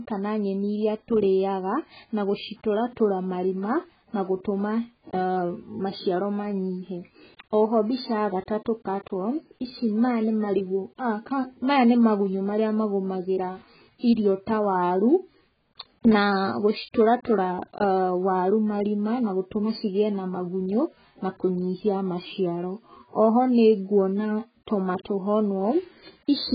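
Throughout the speech, nothing reaches above 4.9 kHz, leaving it dull and smeared with a warbling, fizzy edge on sibilants. This points to heavy AAC compression, likely AAC-LC at a starved bitrate near 12 kbps. A spectrogram shows a flat ceiling and patchy, holed upper bands.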